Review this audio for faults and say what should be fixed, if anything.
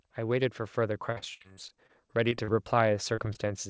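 Automatic gain rising runs from 0.15 s to the end of the clip. The level climbs steadily rather than jumping: the gain control judged the incoming signal too quiet and kept raising its gain, so the speech and the background noise floor swell together over several seconds. Because the background rises along with the speech, this is a gain change and not a change in the talker's level. To prevent it, set the input level correctly at the source or limit how fast and how far the gain control may raise gain.

Repeated packet loss (robotic sound) occupies 1.12 s to 2.49 s. Across this span there are about a dozen separate dropouts, the longest about 65 ms, and roughly a quarter of the stretch is concealment rather than real audio. Each gap is patched by extending the preceding sound, and the next gap arrives before the speech has properly recovered. The result is choppy speech with fragments missing. 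To prevent it, address the network path's loss and jitter, for example with forward error correction or a more stable link.

Two instances of short concealed packet loss occur, at 3.15 to 3.19 s and 3.33 to 3.37 s. In each, about 20 ms of audio failed to reach the decoder in time. The receiver filled the hole by continuing the last sound and then blended back into the real signal, which produces a brief smear or wobble. The band limit at 8 kHz is consistent with the G.722 call codec carrying the audio. To prevent these dropouts, enable redundancy or FEC on the call so that isolated lost packets can be recovered rather than concealed.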